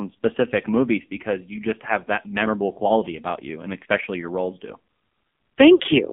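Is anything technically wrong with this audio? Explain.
Yes, there are two faults.

Throughout the clip, the speech sounds thin, buzzy and synthetic, with everything above about 3.5 kHz and below about 200 Hz missing and heavy damage from the codec. This is the AMR narrowband mobile codec. It samples at 8 kHz and rebuilds each 20 ms frame from a vocal-tract model driven by a few pulses. The harshness points to one of its lowest modes, around 5.9 kbps, where the pulse excitation is too sparse to sound natural.

From 5.76 to 5.82 s, the sound briefly smears and dips before recovering roughly. These are lost AMR speech frames. The 40 ms gap fits two 20 ms frames failing their checksum, so the decoder repeated the last good pitch and vocal-tract settings at falling gain. The gap is too short to fade fully to silence, and the speech resumes weak and rough for a moment afterward.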